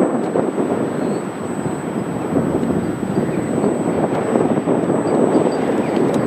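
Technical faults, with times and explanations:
Throughout, USB whine: a thin, steady, high-pitched tone sits under the audio for its full length, pitched at 8 kHz with its strongest component an octave up at 16 kHz, and roughly 20 dB below the wanted sound. It comes from the USB bus drawing current in 125-microsecond microframes, which sets an 8 kHz rhythm. That current pulsing leaks into the audio through shared power or ground, so the whine and its harmonic hold a fixed pitch.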